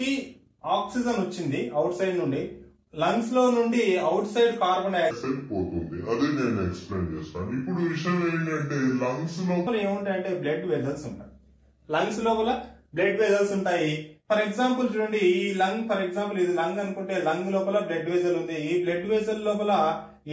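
From 5.11 to 9.67 s there's a wrong sample rate fault: the sound drops to about 0.73 times normal speed and sinks roughly 5.5 semitones, dragging low and slow. That fits audio captured at 22 kHz being played out at 16 kHz without conversion.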